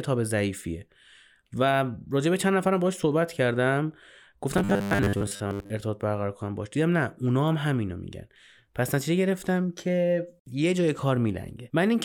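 From 4.58 to 5.71 s the speech collapses into a rigid, metallic buzz pitched at 100 Hz. The words still come through roughly, but most of that stretch is repeated material rather than fresh audio. This is robotic sound from repeated short buffers. The likely cause is new audio arriving too seldom, so playback fills the gaps by looping the last fragment. A 100 Hz buzz fits a repeated chunk about 10 ms long.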